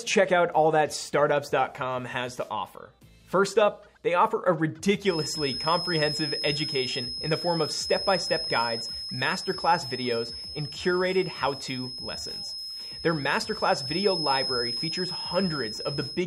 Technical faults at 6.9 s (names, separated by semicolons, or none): feedback whistle